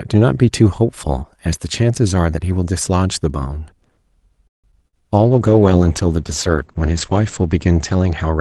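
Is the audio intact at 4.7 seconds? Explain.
No. From 4.47 to 4.66 s the sound stalls: the last sound is stretched briefly, then there are about 150 ms of silence before the audio resumes exactly where it stopped. This is a call audio freeze, likely from packets held up in transit that left the jitter buffer empty.

Just after, from 4.72 to 4.74 s, a short jump or smear follows: about 40 ms of audio never arrives and only a few milliseconds are patched with synthesized continuation. This is short concealed packet loss, as the stream drops audio to catch back up by roughly 30 ms.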